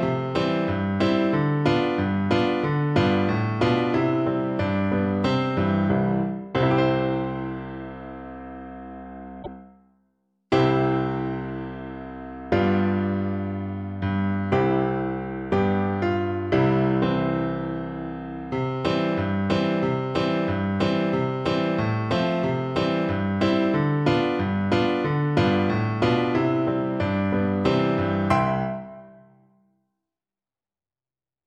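A short glitch cuts through the sound from 9.39 to 9.48 s. This is damaged data in a compressed stream: corrupted bytes made the decoder misread those frames and lose sync until it found the next valid frame header and resumed normal decoding.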